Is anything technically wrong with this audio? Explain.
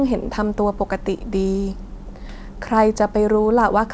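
No, the speech shows no technical faults, and its content stopping at about 8 kHz is what a wideband call path normally produces, consistent with a codec such as G.722.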